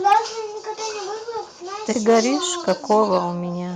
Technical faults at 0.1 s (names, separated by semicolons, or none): microphone overload; microphone volume stepped down